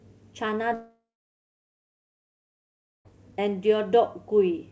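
Speech, and there's a big hole in it from about 0.74 s to 3.08 s, most likely a long network dropout. The last sound gets stretched into a fading buzz for roughly a third of a second, then about 2 s of near-silence, and the speech picks up further on with that stretch simply gone. Nothing above 8 kHz, which fits a G.722 call path.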